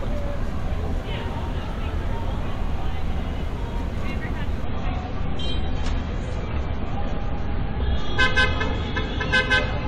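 An adaptive stream at a lower bitrate takes over at 4.64 s and holds to the end of the clip at 9.87 s. The connection evidently slowed, so the player switched to a leaner encoding of the same sound without any gap. The change is abrupt: everything above 11.2 kHz vanishes, and codec artefacts grow thicker, consistent with a drop from roughly 96 kbit/s AAC to around 32 kbit/s.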